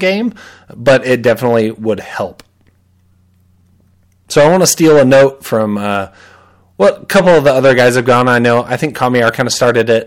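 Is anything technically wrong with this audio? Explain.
Yes. The speech is hard clipped throughout the recording. The signal reaches some stage about 15 dB hotter than it can pass, so every peak above that ceiling is sheared flat, with roughly one sample in twenty cut off. The squared-off waveform adds strong harmonics high in the spectrum. On every louder syllable this is heard as a harsh, gritty fuzz riding on the speech, not as occasional crackle.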